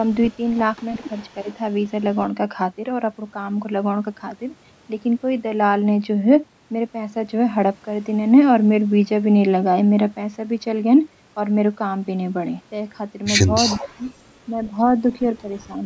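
From 0.05 to 2.3 s, a faint delayed copy of the speech trails the talker. It lags by 354 ms and sits roughly 30 dB down. This is an echo leak. The likely cause is a far end on a loudspeaker whose echo canceller let part of the returned signal through. At 0.98–1.02 s and 1.43–1.47 s, the speech dips briefly, by around 10 dB, for about 40 ms each. This is speech suppressed in double talk. The canceller likely could not tell the talker from the echo and turned both down.

At 13.66–13.89 s the echo leak returns much louder, only about 10 dB below the speech, still 354 ms behind. The leaked copy likely overlapped live speech. From 13.75 to 14.05 s the speech sinks by roughly 15 dB for around 200 ms. This is deeper suppression in double talk, likely from the canceller clamping down. At 15.01–15.26 s a milder dip follows, about 5 dB over roughly 150 ms, likely the same suppression. Band-limiting by the call's microphone processing leaves nothing above 8 kHz.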